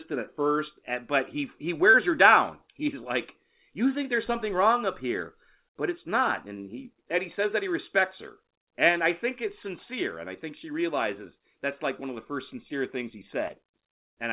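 At 1.90 to 1.96 s, between "first but he he" and "her down", there is short concealed packet loss. About 40 ms of audio never arrived in time. The receiver filled the gap by extending the preceding sound, then blended back. It sounds like a brief smear. It happens again at 13.48 to 13.51 s, after "first sincere things he", with about 20 ms missing. That one is a quicker wobble. Throughout, the call path passes nothing above 4 kHz.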